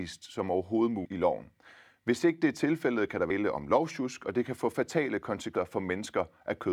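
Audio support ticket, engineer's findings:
Audio missing between chunks. Skips at 3.30 s and 5.55 s, each dropping roughly a third of a second of speech, with the two sides butted together and no gap. Likely a chunked recorder or processor losing audio at each handover, about every 2.5 s. Not a dropout: no silence or muted stretch, just a jump forward in the speech, and the spacing between the two skips is regular.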